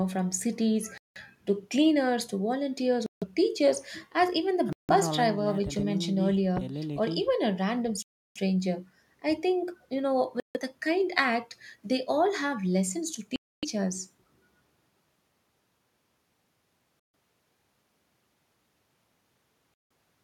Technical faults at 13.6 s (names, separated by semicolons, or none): Bluetooth stall